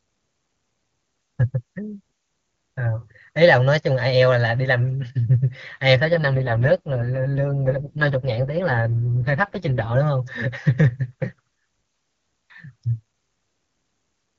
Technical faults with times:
6.04-9.96 AMR rate drop

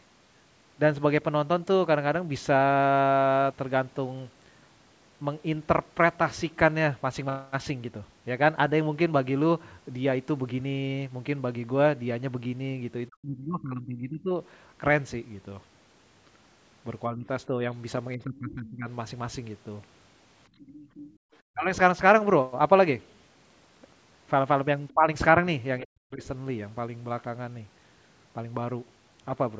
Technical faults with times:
13.08-14.31 speech suppressed in double talk
17.09-18.88 speech suppressed in double talk
18.35-18.70 other side's voice leaking through
20.49-21.25 background gated by the echo canceller
20.61-21.36 other side's voice leaking through
21.53-21.69 speech suppressed in double talk
24.94-26.22 speech suppressed in double talk

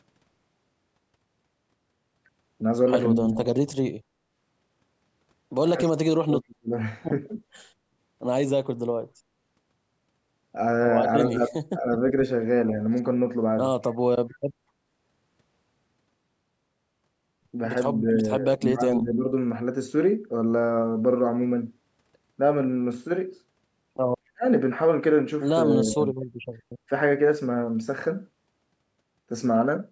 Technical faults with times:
3.16-3.57 speech suppressed in double talk
5.76-6.71 speech suppressed in double talk
7.28-7.35 speech suppressed in double talk
11.31-11.84 speech suppressed in double talk
18.00-19.25 speech suppressed in double talk
24.33-24.44 speech suppressed in double talk
25.76-26.19 speech suppressed in double talk

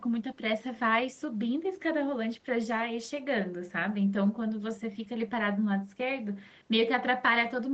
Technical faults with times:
none

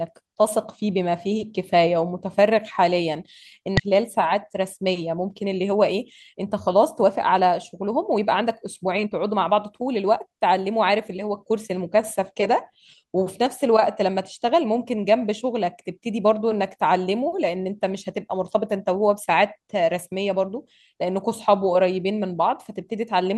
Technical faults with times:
3.77-3.79 skip ahead
3.87-5.94 jitter buffer speed-up
6.33-11.32 jitter buffer speed-up

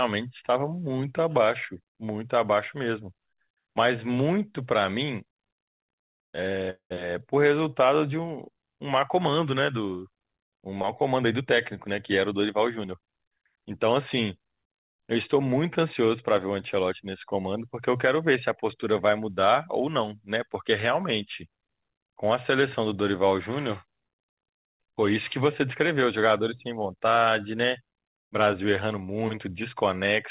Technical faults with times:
6.70-6.96 call audio freeze
11.15-11.46 jitter buffer speed-up
11.88-13.24 jitter buffer speed-up

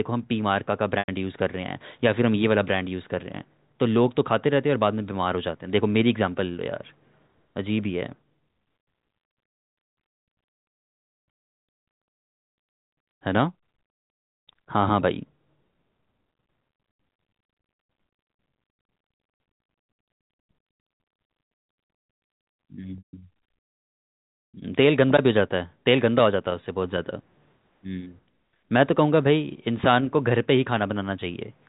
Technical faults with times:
0.99-1.08 packet loss with pitch repetition
22.98-23.22 packet loss with pitch repetition

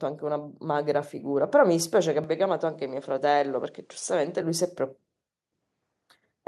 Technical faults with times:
0.20-1.60 automatic gain rising
2.24-4.42 input switched to a poorer device

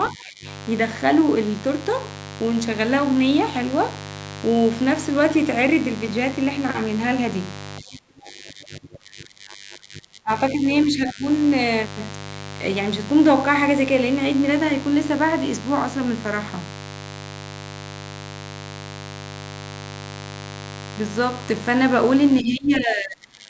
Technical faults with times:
0.00-23.50 mains buzz
0.13-0.46 speech suppressed in double talk
7.81-10.31 speech suppressed in double talk
10.87-11.24 speech suppressed in double talk
22.41-23.50 speech suppressed in double talk

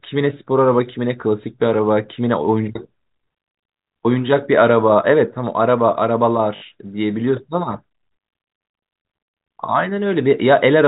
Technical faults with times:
6.56-6.62 packet loss with last packet repeated

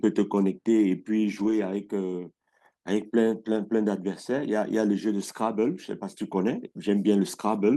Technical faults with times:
1.39-1.53 lost packet rebuilt from error correction

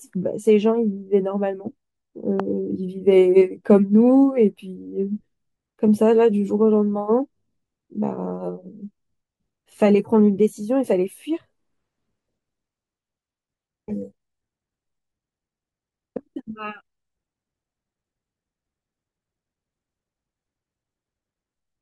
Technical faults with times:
2.40-2.42 loud pop

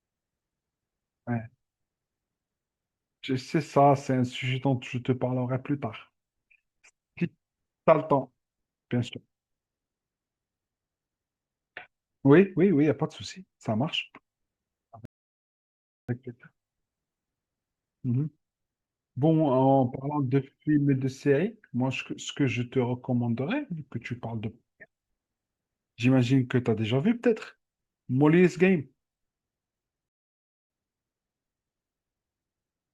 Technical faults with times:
15.05-16.09 rebuffering stall
30.09-30.70 rebuffering stall

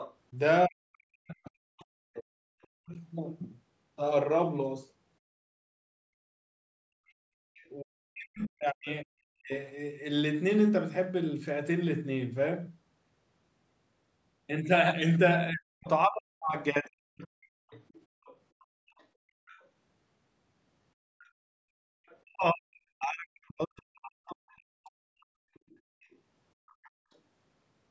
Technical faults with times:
0.00-2.97 other side's voice leaking through
0.66-2.93 speech suppressed in double talk
7.08-7.69 other side's voice leaking through
7.18-7.36 background gated by the echo canceller
7.81-9.51 speech suppressed in double talk
15.50-17.71 speech suppressed in double talk
17.70-27.15 other side's voice leaking through
18.11-18.22 background gated by the echo canceller
21.51-21.95 background gated by the echo canceller
22.23-25.18 speech suppressed in double talk

